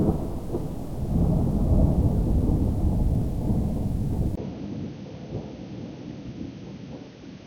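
At 4.35 s the sound drops out for about 20 ms. When it returns, everything above 6.4 kHz is gone, and it stays that way to the end. The tone turns dull and boxy. The level falls by about 5 dB. A new background noise sits roughly 40 dB under the sound. This is an input switched to a poorer device, likely a change to another microphone or a headset's call profile.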